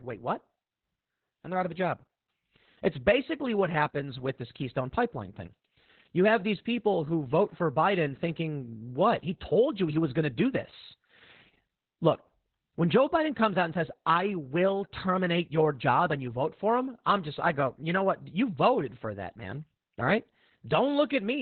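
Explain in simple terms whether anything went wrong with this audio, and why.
Heavy Opus voice compression runs through the whole recording. The speech coder squeezed the sound into a narrow, telephone-like band, cutting everything above about 4.2 kHz, and coded the voice roughly, so the speech sounds muffled, hoarse and slightly robotic from start to finish.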